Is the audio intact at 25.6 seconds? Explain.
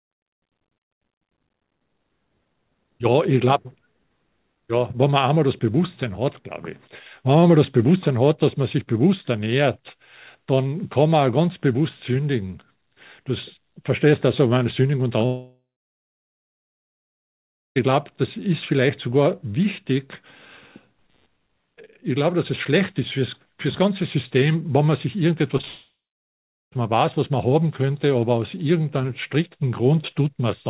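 No. Two short concealed packet losses fall at 25.58–25.61 s and 25.61–25.65 s. In each, about 20 ms of audio never arrived, and the receiver filled the gap by extending the last sound, which gives a brief smear or wobble.

At 25.65 s the audio breaks off until 26.77 s, a gap of about 1.1 s, which points to a likely long network dropout. The concealment fades out and is followed by roughly 0.8 s of near silence. The audio then resumes without the missing part.

Computer activity noise is also present here, running from 10.75 s to the end. It is a faint buzz pulsing around 150 Hz, roughly 45 dB below the signal, caused by load-driven disturbance on the shared ground.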